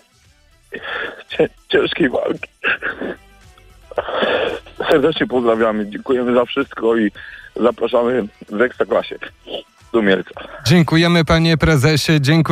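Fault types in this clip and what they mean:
Corrupt frame decoded: damaged compressed frames played anyway, putting energy at wrong frequencies. A loud error spans 2.14 to 2.27 s. A fainter one follows at 4.03 s.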